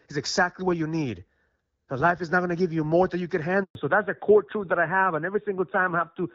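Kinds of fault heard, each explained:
Handover gap: the link switched networks and no frames arrived, so the speech drops to silence for 120 ms, from 3.63 to 3.75 s.
Fallback to narrowband: after the gap the call leaves HD Voice. Nothing above 4 kHz remains, and the duller, rougher sound fits narrowband AMR near 7.4 kbit/s.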